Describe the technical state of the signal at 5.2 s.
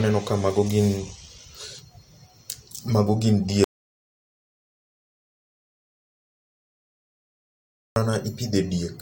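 At 5.2 s the signal is in an audio dropout to silence, running 3.64 to 7.96 s after "mago gin": silence with no room tone, likely from lost input.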